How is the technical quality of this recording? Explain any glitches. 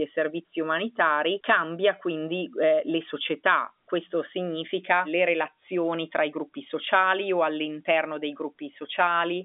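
No glitches turn up here; the speech simply carries the usual narrow telephone band of about 250 Hz to 3.6 kHz that comes with G.711 telephone coding, which is just how a phone line passes it along.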